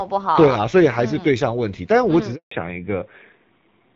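At 2.35 s the speech cuts out abruptly and stays silent for 160 ms until 2.51 s: a handover gap, where no speech frames arrived while the call switched networks. From 2.51 s to the end the voice turns dull and rough, with nothing above 4 kHz. That is a fallback to narrowband, from the fairly clear HD Voice (AMR-WB) sound to what fits AMR-NB at 7.4 kbit/s.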